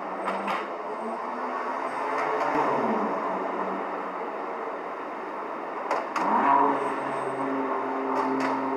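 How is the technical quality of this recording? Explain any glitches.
There is one glitch: a stretch of channel delay (comb filtering) from 0.51 to 2.55 s. Through that span the sound turns hollow and phasey, as if heard through a tube. One channel arrives around 10 ms behind the other, and when the two are summed to mono, the shared content cancels at evenly spaced frequencies. The result is a comb of fixed notches starting low, roughly 40 Hz, and repeating up the spectrum.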